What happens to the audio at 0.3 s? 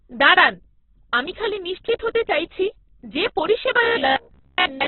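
At 0.3 s you're hearing heavy Opus compression, and it runs through the whole clip. The speech is cut off above about 4.1 kHz and sounds grainy and rough, likely from a very low bitrate around 8 kbps, with the encoder filling starved bands with noise.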